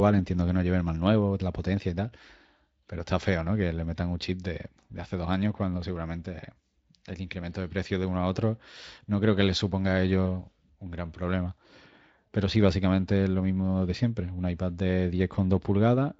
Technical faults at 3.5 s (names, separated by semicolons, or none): none